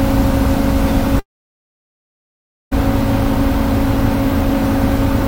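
From 1.19 to 2.73 s the sound cuts out: a brief decaying buzz, then about 1.5 s of silence, likely a long network dropout, far longer than a concealed packet gap.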